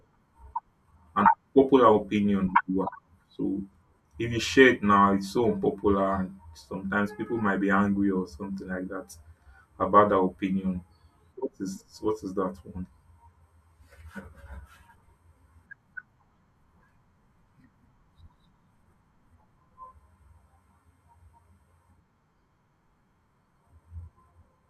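No technical faults occur at any point in the speech, so there is nothing to describe in time order.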